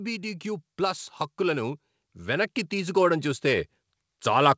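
From 0.2 s to 3.74 s the speech and the background swell together, climbing steadily by about 9 dB. This is automatic gain rising: the gain control judged the input too quiet and raised it gradually. Throughout, nothing is heard above 8 kHz, which fits a wideband call codec.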